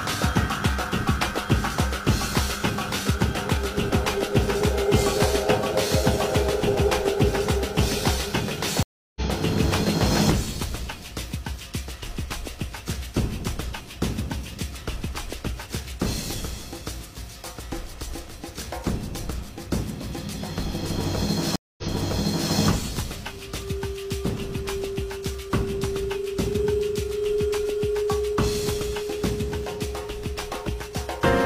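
At 8.83 s the sound cuts out for 330 ms, a stream reconnect. Playback resumes about 0.4 s later, skipping material. At 21.56 s a second reconnect brings 221 ms of silence. The fresh decoder then restarts 743 ms earlier, repeating audio.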